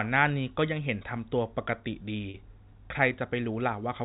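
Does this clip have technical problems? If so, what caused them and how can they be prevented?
Yes. Around 2.30 to 2.34 s the sound briefly holds and turns slightly buzzy. This is packet loss with pitch repetition: about 40 ms of audio, consistent with two 20 ms packets, went missing, and the receiver filled the gap by repeating the last pitch period. Jitter buffering and forward error correction on the network path would prevent it.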